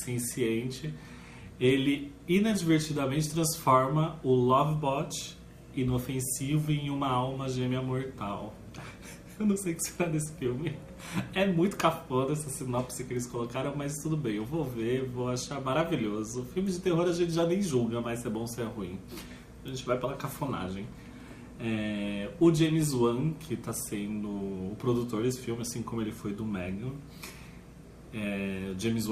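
No technical faults are audible.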